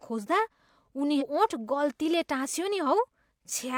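At 1.17 s, compressed frames are skipped. Frames of 42.7 ms went missing, so the speech jumps ahead roughly 0.3 s.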